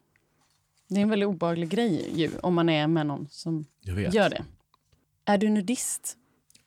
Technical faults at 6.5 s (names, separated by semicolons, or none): none